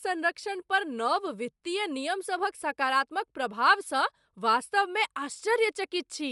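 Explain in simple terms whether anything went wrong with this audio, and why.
Something's off from start to finish: the speech has a grainy, breathy edge, and nothing reaches above about 11.6 kHz, so the top sparkle is missing. That's likely Bluetooth LC3 compression, which squeezes sound in 10 ms chunks and drops the finest detail.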